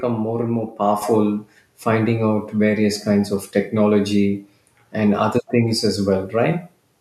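At 1.02 s the speech and the background noise jump louder together, by about 6 dB, in a single abrupt step. This is the microphone volume stepped up: the call software judged the input too quiet and raised the device's input level in one move.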